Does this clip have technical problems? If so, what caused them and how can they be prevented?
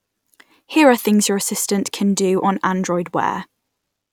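No technical faults are present.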